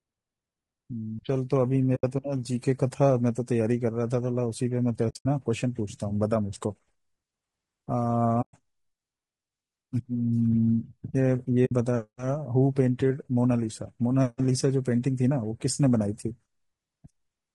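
Low-delay AAC compression runs through the whole of this speech clip: the voice sounds rough and grainy, with noise filling the spaces between pitch harmonics and a thin, somewhat synthetic top band. This is likely AAC-ELD, the low-delay codec of video calls. Its short frames resolve harmonics poorly and spend bits less efficiently, so damage this plain fits a bitrate around 32 kbps. AAC frame loss with muting leaves soft-edged holes at 1.95 to 2.04 s, 5.09 to 5.26 s, 8.41 to 8.55 s and 11.65 to 11.72 s, with the sound fading out and back in. When a frame goes missing the decoder zeroes its spectrum, and the overlapping windows smooth the edges. The gaps run from 60 to 140 ms of lost audio, which fits 20 ms frames. The one near 5.1 s is broken up across 160 ms, its longest silence roughly 70 ms.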